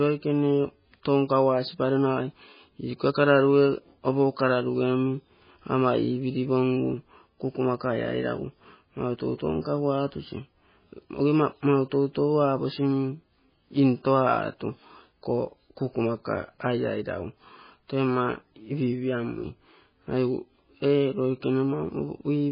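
MP3 compression damage runs through the whole speech clip. Nothing is heard above 5 kHz, and weak frequency lines drop in and out between frames, giving a watery, swirling texture and smeared onsets. The heavy damage likely comes from a very low bitrate, around 16 kbps.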